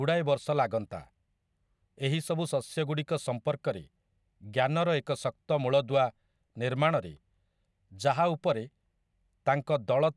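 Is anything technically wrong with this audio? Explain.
No, nothing technically wrong can be heard in this speech recording. No problem from the recording, transmission or playback chain stands out at any point in the clip.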